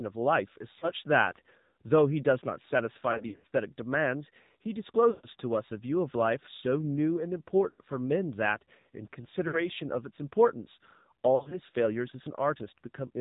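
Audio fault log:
Throughout: AMR narrowband mobile codec. Nothing above 4 kHz survives, and the speech has a plainly audible buzzy, synthetic edge. The speech is rebuilt from a coarse vocal-tract model and a few pulses per subframe, which fits the low 7.4 kbps mode.
0.80–0.87 s, 3.12–3.46 s, 5.10–5.27 s, 7.70–7.81 s, 9.48–9.58 s, 11.36–11.59 s: lost AMR speech frames. The decoder repeats the last pitch and vocal-tract settings at falling gain, so the sound smears and fades before returning rough. The losses are 20 ms (a brief warble), 160 ms scattered over 320 ms, 140 ms, 80 ms, 60 ms, and 100 ms scattered over 160 ms.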